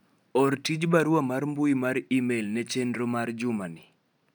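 Speech recording with no audible technical faults at any point.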